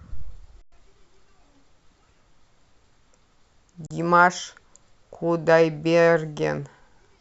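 At 0.62 s the speech halts for about 104 ms, an underrun with held sample: the output buffer ran dry and the converter froze on its last value, so the waveform sits flat, typically off zero, and the sound simply stops without a click. No audio was lost, so playback picks up where it left off and the restart is soft. The same happens at 3.86 s for 40 ms. Unlike a dropout to silence, the held level avoids the sharp click at onset.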